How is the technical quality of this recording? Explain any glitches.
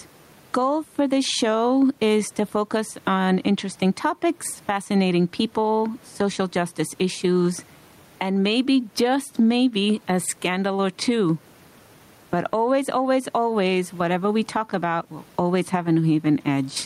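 Gain pumping runs through the whole speech recording: the gain swings by about 15 dB, pulling down under each loud syllable, leaving the level squashed and flattened. The likely cause is far too much input gain, with a fast limiter or compressor clamping down on each peak. The room noise sits about 40 dB below the speech.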